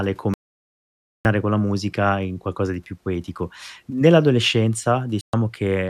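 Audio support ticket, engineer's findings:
Digital broadcast dropout, 0.34 to 1.26 s. Speech mutes for about 0.91 s and resumes at "con la musica in". Receiver side. Frames lost or failed checksum, so the decoder muted until valid frames returned. The gap fits roughly 38 lost frames. Missing content is unrecoverable.

Digital broadcast dropout, 5.21 to 5.34 s. Short hole of 120 ms. Same mechanism. The gap points to about five bad frames. The audio returns afterwards.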